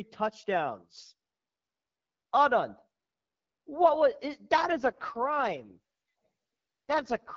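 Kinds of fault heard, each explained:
AMR rate drop: The radio link weakened, and the network ordered the AMR-WB encoder into a lower mode, spending fewer bits on the speech and more on error protection. From about 4.72 s to the end, the speech turns coarse, raspy and synthetic, with no gap and no narrowing of the band. Compared with the light wideband codec softening before it, the change in roughness fits a step down from 12.65 to 6.6 kbit/s.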